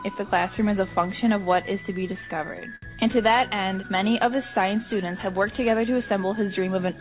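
Repeated stalls (stutter) run from 1.94 to 2.84 s. Packets arrived late or too slowly to keep pace with playback, so the jitter buffer emptied nine times. At each gap the receiver stretched the last bit of sound to cover the wait, about 143 ms in all and roughly 16% of that stretch, with the longest hold lasting 67 ms. No audio is lost, but the passage drags and stutters in short, repeated catches.

A jitter buffer speed-up follows from 5.04 to 5.41 s. The buffer had built up more audio than it targets, so the receiver trimmed out several short pitch-period-length pieces in quick succession, removing roughly 40 ms. Playback runs at about 109% speed while the pitch stays put, so this short section sounds rushed. Throughout the clip, the sound stops at 4 kHz, which fits a narrowband G.711-type call codec.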